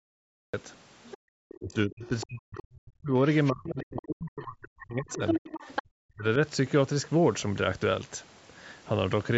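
Cut-off start at 0.54 s: the speech recording opens on digital silence and jumps straight into a sound already under way, with no natural attack, because capture began late. The other side's voice leaks through at 1.04–1.17, 1.49–1.59, 2.06–2.24, 3.33–3.49, 3.96–4.02 and 5.1–5.82 s. Most of these scraps sit roughly 20 dB under the talker, but the last, longest one comes within about 5 dB. They are likely loudspeaker playback that the echo canceller failed to remove from the microphone. Speech is suppressed in double talk from 1.25 to 3.14 s and from 3.51 to 6.25 s. Over roughly one and a half and two seconds of those spans, the talker dips by as much as about 40 dB or drops out in pieces. This is likely the canceller ducking everything while both sides spoke at once.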